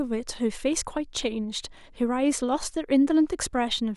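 No technical faults are audible anywhere in this recording.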